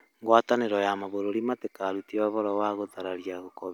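No technical faults turn up anywhere in the speech. There is nothing here to place on a timeline or trace back to a cause.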